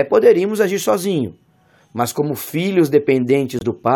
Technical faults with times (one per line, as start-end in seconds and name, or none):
3.59-3.63 corrupt frame muted